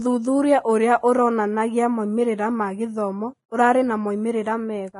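From start to finish the speech sounds hissy and grainy, with nothing above 10.6 kHz. That's most likely heavy Vorbis compression, consistent with roughly 27 kbps: the treble gets quantised so coarsely that fine detail turns into noise, so consonants smear and tones roughen.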